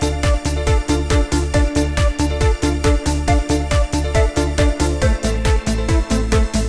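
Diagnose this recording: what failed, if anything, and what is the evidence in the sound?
Nothing failed at any stage from capture to playback; the recording shows no audible evidence of a fault.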